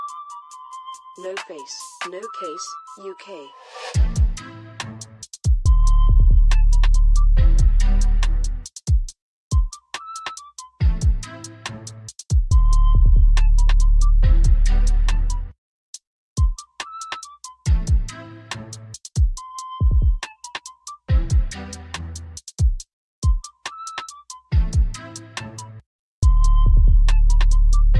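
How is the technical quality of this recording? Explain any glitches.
No glitches or technical faults can be heard anywhere.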